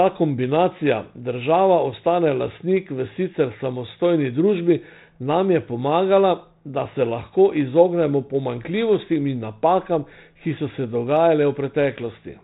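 No technical faults can be heard anywhere in the speech. The sound has passed through G.726 ADPCM at 32 kbit/s, which caps the band below 4 kHz and leaves only a light trace of coding noise.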